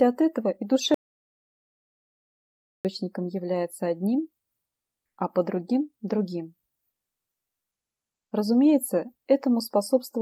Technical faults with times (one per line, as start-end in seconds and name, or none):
0.94-2.85 audio dropout to silence
4.65-5.17 comfort noise in place of the background